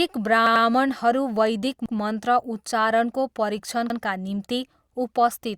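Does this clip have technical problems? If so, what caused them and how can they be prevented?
Yes. Repeated buffer stutters occur at 0.46–0.65 s, where one 93 ms piece of speech sounds three times, and at 1.86–1.95 s and 3.90–3.99 s, where a piece sounds twice. Fresh audio arrived late, so the device replayed its last block; the 93 ms length fits a 4096-sample buffer. Unlike a dropout, there is no silent gap: the identical fragment repeats with a hard join at each repeat. Giving the audio thread higher priority or keeping more audio queued ahead of playback prevents it.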